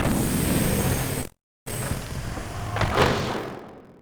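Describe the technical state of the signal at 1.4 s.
At 1.4 s the signal sits inside a call audio freeze running from 1.21 to 1.68 s. The incoming stream stalls, and the receiver stretches the last sound into a buzzy tail that fades into about 310 ms of silence. The most likely cause is delayed packets draining the jitter buffer. When delivery resumes, playback continues from the point where it stopped, so about 448 ms has been inserted, nothing is lost, and everything after it runs that much later.

Buffer tearing also runs through the whole clip, including this point, and shows up as a robotic buzz at 43.1 Hz, which fits a 1024-sample buffer. The writing and reading positions in the ring buffer have slipped and cross within every period. As a result, roughly a fifth of each buffer replays audio from about 50 ms earlier, with hard splices at both edges of that stale segment, producing a steady rattle at the buffer rate.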